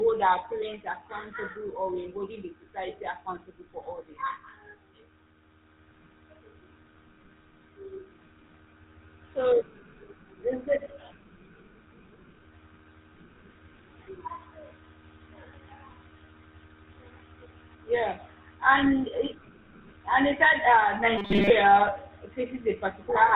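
Speech heard through the GSM full-rate codec for its whole length: the excitation is rebuilt from regularly spaced pulses, which gives a buzzy, gravelly roughness, and nothing above 4 kHz survives. The grain is what sets it apart from a simple low-pass muffle, and it fits a 13 kbps GSM stream. From 21.18 to 21.50 s there is robotic sound from repeated short buffers, likely from audio arriving too seldom. A fragment of about 5 ms is looped while most of the real audio in that stretch is skipped, imposing a rigid 200 Hz metallic buzz. Unlike the codec's roughness, that pitch stays fixed rather than following the voice.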